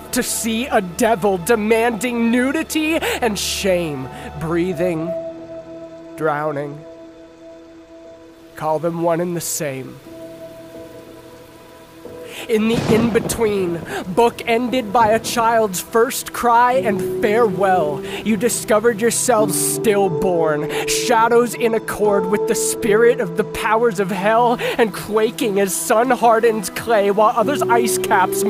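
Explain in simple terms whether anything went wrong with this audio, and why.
Nothing went wrong here; no faults can be heard.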